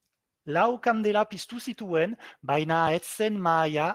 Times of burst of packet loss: none

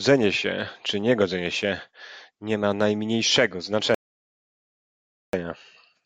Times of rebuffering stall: 3.95-5.33

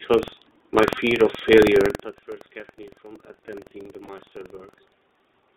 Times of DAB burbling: none

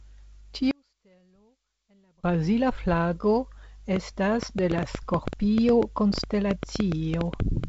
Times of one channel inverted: 0.71-2.24

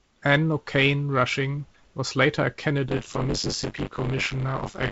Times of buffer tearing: 2.88-4.91

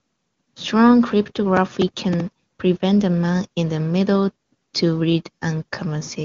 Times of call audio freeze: none

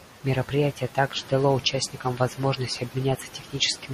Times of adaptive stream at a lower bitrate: 1.15-3.94

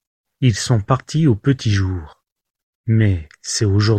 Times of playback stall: none

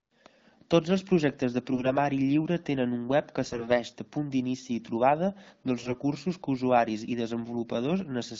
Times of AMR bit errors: 1.72-1.92, 3.43-3.72, 5.79-5.94

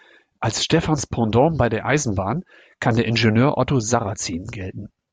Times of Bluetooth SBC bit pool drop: none

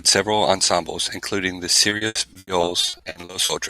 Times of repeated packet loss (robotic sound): 1.89-3.51

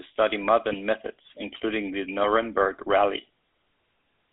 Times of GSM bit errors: 0.70-0.75

